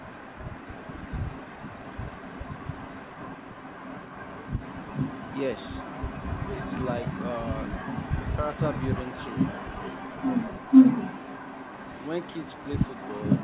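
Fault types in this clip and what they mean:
Echo leak: Throughout the speech, a second copy trails the original by about 0.47 s and sits only a little below it, so the speech is shadowed by a delayed repeat. The likely cause is a far-end loudspeaker whose sound reached its microphone and slipped past the echo canceller. Unlike room reverberation, which smears into a decaying tail, this is a discrete, delayed duplicate, band-limited like the rest of the call audio to below 4 kHz.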